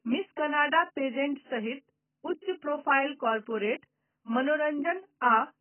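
Speech, and it's been squeezed hard the whole way through. Nothing comes through above about 3.1 kHz, so it sounds dull, and the consonants and sibilants have that smeared, fizzy, warbly texture you get when the encoder starves the upper bands. That's likely AAC compression, AAC-LC pushed to a very low bitrate, which fits something around 12 kbps, with heavy codec damage from start to finish.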